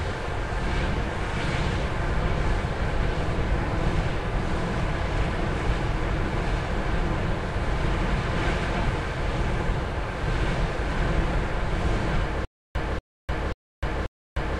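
From 12.45 s to the end, a 0.24 s burst repeats four times with 0.30 s of dead silence between, a stutter with silent gaps, likely from a stalled stream replaying its last fragment.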